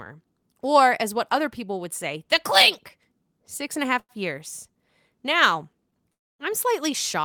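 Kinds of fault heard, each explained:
Short stall from a late packet: the jitter buffer ran dry while a packet was late, so the last sound was stretched until it turned up. After "and a" at about 3.99 s there's a 95 ms hold, then another brief one at 5.90 s of about 16 ms. Nothing's lost, the speech just pauses slightly and everything after lands a touch later.
Call audio freeze: at 6.12 to 6.42 s the audio stops dead for about 270 ms, going silent before picking up where it left off. Likely packets held up in transit that emptied the jitter buffer, so a gap was inserted rather than anything cut out.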